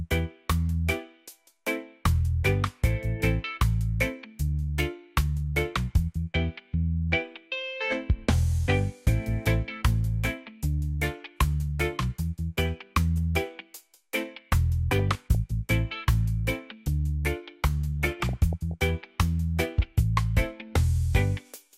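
DAB burbling appears from 14.99 to 15.35 s and again from 18.06 to 18.74 s. Bit errors slipping past correction put short blips of noise in single sub-bands and make sub-bands jump in level for up to a frame.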